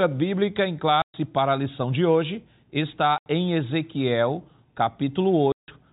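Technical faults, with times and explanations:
1.02–1.14 s (between "bíblica em" and "para a lição de"), 3.18–3.26 s and 5.52–5.68 s: packet loss filled with silence. Gaps of 120, 80 and 160 ms, all multiples of 20 ms, which fits 20 ms packets. They are true dead air with hard edges, not repeated or smeared concealment, over the telephone-band G.711 sound.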